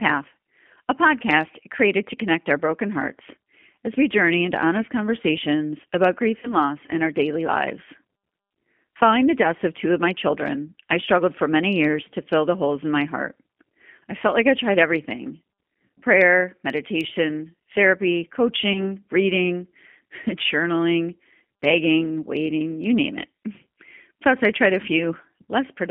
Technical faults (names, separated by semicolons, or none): G.729 codec; VoIP packet loss concealed by the speech codec